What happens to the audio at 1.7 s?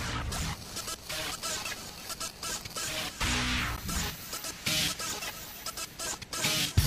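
Nothing goes wrong at 1.7 s; the audio plays through that moment intact.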